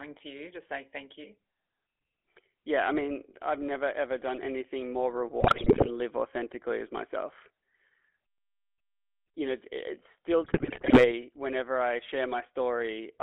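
GSM full-rate codec damage runs through the whole of this speech recording, giving the voice a buzzy, gravelly roughness. The codec rebuilds the voice from a vocal-tract filter driven by a sparse, regularly spaced pulse excitation, and that coarse excitation is what grinds on voiced sounds. The band is confined to roughly 300 Hz to 3.5 kHz, and the plainly audible texture fits 13 kbps full-rate coding. GSM bit errors strike twice, from 5.40 to 5.89 s, between "done anything more" and "live authentically as myself", and from 10.44 to 11.17 s, between "know it's still" and "whenever I", at error rates near 6% and 5%. Flipped bits corrupt the decoder's filter, pitch and gain values, so the spectrum warps and the level jumps frame by frame, breaking the voice into squawks, pops and gargling.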